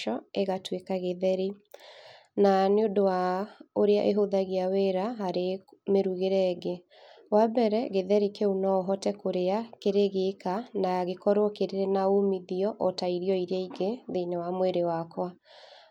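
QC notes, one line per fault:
No faults detected in this clip.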